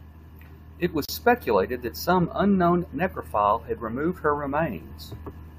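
A gap at a join of encoded pieces appears at 1.05 s, lasting about 35 ms until 1.09 s. The speech was evidently encoded as separate segments and butted together without trimming. The encoder's start-up silence and the padding on the previous segment's final frame were both left in place. The result is a brief dropout with smeared edges, after which the speech resumes exactly where it broke off.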